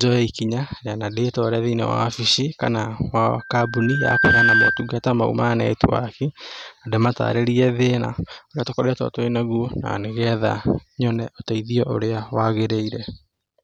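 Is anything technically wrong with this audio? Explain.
Yes. There is a loudspeaker feedback squeal from 3.39 to 5.04 s. A microphone was picking up a loudspeaker that it was feeding. At about 1.6 kHz the loop gain rose above one, so that frequency fed on itself. The tone swells over roughly a second. It then sits clearly above the speech, at a level roughly 5 dB louder. It ends at 5.04 s.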